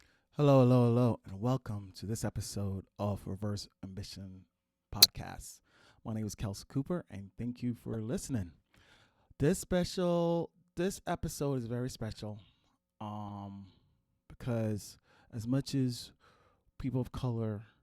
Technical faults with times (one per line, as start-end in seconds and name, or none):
1.28-1.32 corrupt frame decoded
5.01-5.06 corrupt frame decoded
7.93-7.96 corrupt frame decoded
9.62 corrupt frame decoded
10.95-10.99 corrupt frame decoded
12.12-12.19 corrupt frame decoded
13.28-13.31 corrupt frame decoded